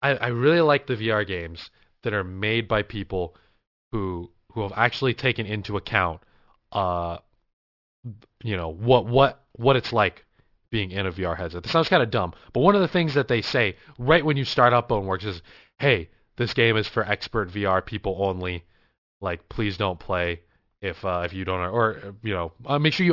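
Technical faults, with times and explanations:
Throughout, aliasing: downsampling, apparently to 12 kHz, lacked an anti-alias filter, so content above 6 kHz folds back as gritty, metallic tones about 20 dB down.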